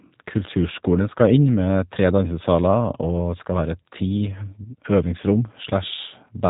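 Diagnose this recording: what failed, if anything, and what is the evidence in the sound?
Rough, synthetic-sounding speech throughout, with nothing above 3.8 kHz: a codec fault, G.729 compression rebuilding speech from a vocal tract model and sparse pulses.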